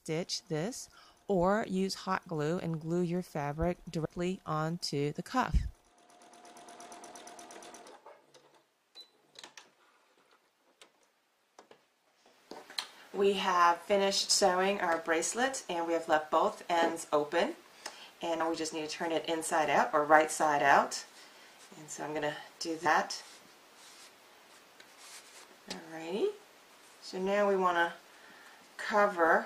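At 4.04 s, 18.39 s and 22.85 s the audio lurches forward by roughly a tenth of a second, the mark of compressed frames skipped. Whole blocks of encoded audio went unplayed, and the jump fits several frames of about 23.2 ms each. Unlike a dropout, no silent gap appears; the audio simply jumps ahead at each join.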